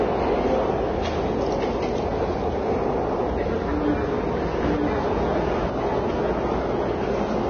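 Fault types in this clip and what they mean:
Vorbis compression: Throughout, the audio sounds hissy and grainy, with nothing above 6.5 kHz and smeared attacks. This is likely heavy low-bitrate Vorbis coding, around 19 kbps, where the treble above a smooth spectral floor is quantised so coarsely that detail turns to noise.
Doubled audio track: From 4.63 s to the end, a second full-band copy of the sound enters abruptly, about as loud as the original and roughly a second behind it, with no decay or room colour. Two out-of-step copies, likely from a second capture path, are mixed together.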